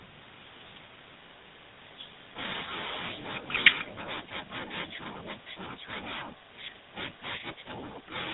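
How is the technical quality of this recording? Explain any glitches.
The quality is plainly degraded: the speech sounds coded and narrowband, with two short glitches.

Throughout, the speech has a buzzy, gravelly roughness and nothing above 4 kHz, the sound of the GSM full-rate codec rebuilding the voice from sparse pulsed excitation.

From 3.13 to 3.26 s, a faint copy of the voice trails about 195 ms behind, likely an echo leak past a loudspeaker-side echo canceller.

From 6.29 to 6.52 s, the room sound dips by up to about 20 dB for roughly 0.2 s. This is background gated by the echo canceller, which briefly clamped the microphone.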